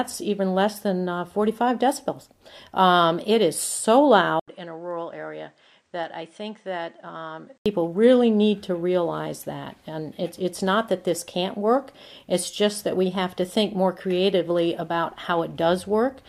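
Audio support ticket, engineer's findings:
Input switched to a poorer device, 4.40–7.66 s. About 80 ms gap at entry, then band cut at 9.8 kHz, level roughly 10 dB down, new low noise floor. Likely input routed to a lower-grade microphone or headset profile, restored at 7.66 s.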